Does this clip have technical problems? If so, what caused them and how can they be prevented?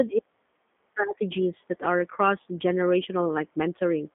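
Yes. Throughout, the speech has the rough, synthetic grain of the G.729 codec, which fits 8 kbit/s G.729A rebuilding it from a vocal tract filter and sparse pulses. Plain band-limiting would only muffle it: here the band sits at 150 Hz to 3.6 kHz, nothing passes above 3.8 kHz, and the speech is still audibly rough. Using a wideband codec such as Opus would prevent it.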